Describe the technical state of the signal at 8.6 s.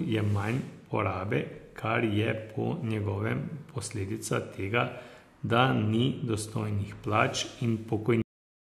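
The final buffers were never written out, so from 8.22 s to 8.70 s the cut-off end leaves digital silence: speech stops abruptly mid-sound, without decay.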